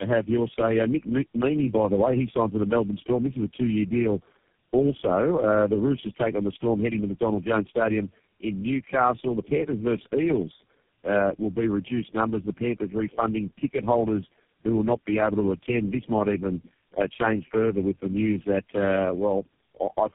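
Throughout the speech, tandem speech coding degrades the sound. It points to four low-rate speech codecs in sequence, likely ending in GSM full rate, each re-encoding its predecessor's errors. The result is rough, muffled and warbly, with nothing above 3.4 kHz.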